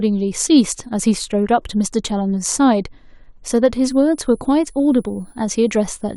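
From 3.79 s to the end of the clip, a switching supply whistle sits under the speech: a thin, high tone near 10 kHz, wandering between about 9.89 and 10.06 kHz, roughly 35 dB below the speech. A power supply's switching frequency has fallen into the audible range and leaked into the signal path. On a spectrogram it appears as a narrow, slightly wavering horizontal line starting abruptly at 3.79 s. The waveform shows no visible change.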